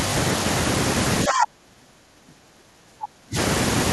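At 1.27 s, the other side's voice leaks through until 1.44 s. It sits about 5 dB above the talker. Residual loudspeaker echo, likely missed by the echo canceller, causes it. From 1.27 s to 3.37 s, speech is suppressed in double talk. The talker's voice drops, by about 30 dB at worst. The canceller likely turned both sides down together.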